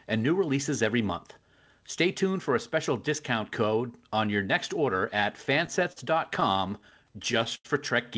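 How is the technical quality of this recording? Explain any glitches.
The speech stutters in two stretches, and the audio carries no content above 8 kHz, which fits a wideband call codec such as G.722.

Repeated stalls (stutter) occur at 5.54–5.98 s (four brief gaps, longest 38 ms) and 6.40–7.66 s (nine gaps, longest 89 ms). Packets arrived late, draining the jitter buffer, so the receiver stretched the last sound to cover each wait. Nothing is lost, but the speech drags and hiccups.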